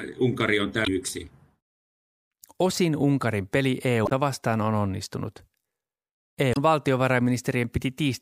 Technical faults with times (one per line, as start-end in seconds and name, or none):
0.83-0.88 damaged data in a compressed stream
4.05-4.12 damaged data in a compressed stream
6.51-6.57 damaged data in a compressed stream